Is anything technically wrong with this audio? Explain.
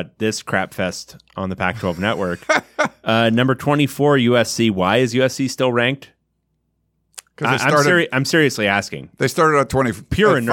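No, nothing is technically wrong with this audio.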